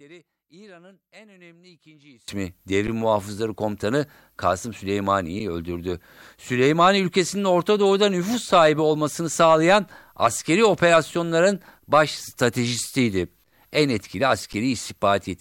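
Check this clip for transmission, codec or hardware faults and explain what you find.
Two problems turn up here, one at the very start and a few brief dropouts later on.

From 0 to 2.28 s the speech comes through about 28 dB down. The likely cause is one channel inverted: with one side's polarity flipped, the centred voice cancels in a mono sum, leaving only the faint difference between channels.

At 2.87 s, 5.39 s and 14.53 s there's an underrun with held sample, lasting about 10 ms, 7 ms and 10 ms. The output buffer ran dry and the converter froze on its last value, so the sound flattens briefly. Playback then resumes where it left off, so each gap ends softly, with little click.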